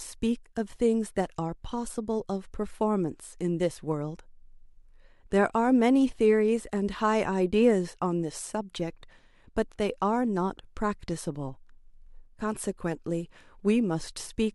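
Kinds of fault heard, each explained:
No kinds of fault are heard in this clip.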